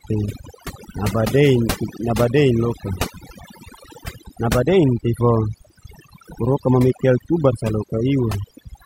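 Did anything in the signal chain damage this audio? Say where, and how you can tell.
Yes: overdone noise removal runs throughout the speech, a noise reduction stage set far too aggressively. Bands near its noise estimate are pulled down or cut entirely, taking quiet voice detail with them, so the background drops away and breaks up into twinkling specks.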